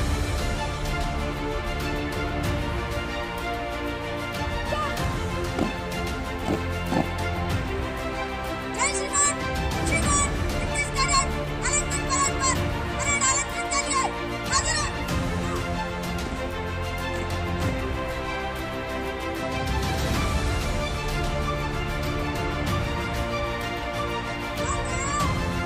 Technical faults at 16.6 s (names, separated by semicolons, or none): none